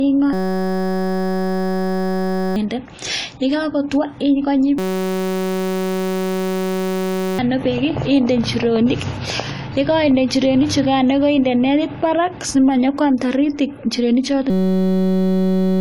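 Throughout the speech, the sound is dull and smeared, with nothing above 11.5 kHz and a warbling, fizzy edge on sibilants. This is likely AAC compression at a low bitrate, around 32 kbps AAC-LC, where the encoder drops high bands and coarsely quantises the rest. A simple low-pass filter would only dull the sound, so the swirling, unstable texture is what points to this codec damage.

From 0.33 to 2.56 s, a system hang loop replaces the audio with a steady buzz at 188 Hz. The playback hardware kept replaying one 5.33 ms fragment, which fits a 256-sample buffer, while the system was frozen, and about 2 s of audio is lost. The same fault returns from 4.78 to 7.39 s, ending just before "bek inde injirenik" and costing about 3 s, then again from 14.50 s, right after "simanyo kwam taritik injirenik", to the end at 15.80 s. A dropout would go silent and an ordinary stutter would repeat audibly longer pieces, but here the buffer is so short that the exact repetition fuses into a pitched drone.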